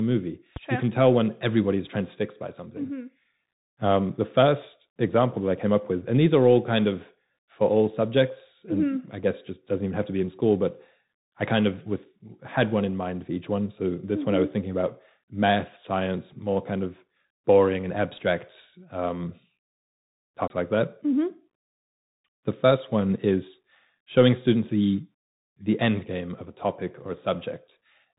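The whole clip runs through a Bluetooth CVSD headset codec, and the damage is plain: the speech is narrowband, with nothing above 4 kHz, a grainy hiss underneath, and scratchy, distorted sibilants where the one-bit step can't keep up, which fits a 64 kbps CVSD link.

Right at the start, from 0.56 to 0.59 s, there's a single loud pop peaking about 5 dB above the speech, likely a voltage step from a plug, switch or static discharge. The speech carries on underneath it.

At 20.48 to 20.50 s you get a CD skip: the audio mutes for roughly 30 ms, then resumes from a different point, as though the laser jumped to another turn of the spiral, so the speech lurches abruptly.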